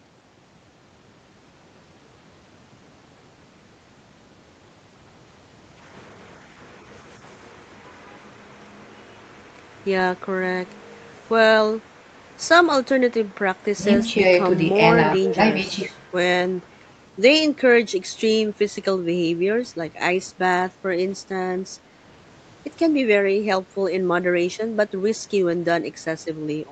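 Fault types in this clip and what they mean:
Speech suppressed in double talk: the voice dips by roughly 10 dB from 13.76 to 14.21 s and again from 15.18 to 15.39 s. Likely the echo canceller couldn't tell this talker from the far-end echo during overlap, so it ducked everything.
Echo leak: from 15.25 to 15.34 s there's a short scrap of the voice coming back about 290 ms late, sitting about 10 dB under the speech. That's likely a speakerphone whose echo canceller let part of its mic pickup slip through and sent it back.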